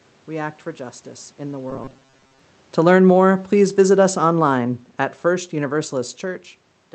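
Robotic sound from repeated short buffers runs from 1.71 to 2.39 s, right after "for justice in the". A metallic, fixed-rate buzz near 134 Hz follows the original only roughly, with about half the audio repeated rather than new. That likely comes from late audio being covered by looping a segment of about 7.5 ms.

Automatic gain falling spans 2.68 to 5.95 s. The gain control judged the input too loud or its background too strong and lowered its gain by about 5 dB, so the voice and room noise sink together steadily rather than abruptly.

Automatic gain rising interrupts that descent from 3.09 to 3.53 s. The control briefly judged the level too quiet and raised gain by about 3 dB, making voice and background swell together for under half a second before the downward drift resumes.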